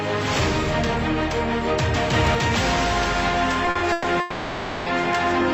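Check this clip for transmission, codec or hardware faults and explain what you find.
Two network-related faults show up near the end of the clip.

From 3.65 to 4.06 s there are repeated stalls (stutter): four brief holds, the longest 120 ms, totalling 190 ms, nearly half that span. Late packets kept draining the jitter buffer, so the receiver stretched the last sound each time. It drags and hiccups. On a spectrogram, short smeared horizontal bands interrupt the normal texture.

From 4.20 to 4.88 s, a call audio freeze holds the sound for 660 ms as a sustained, fading buzz or hiss, with no true silence, before the audio resumes where it stopped, 660 ms later. The likely cause is packets held up in transit. On a waveform this appears as a flat-textured, decaying stretch.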